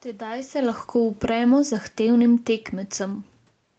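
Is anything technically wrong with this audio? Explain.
Yes. There is automatic gain falling from 0.21 s to 2.43 s. The gain control judged the input too loud, or its background noise too strong, and pulled its gain down by about 6 dB. The speech starts loud, then sinks gradually, and the room noise behind it sinks too.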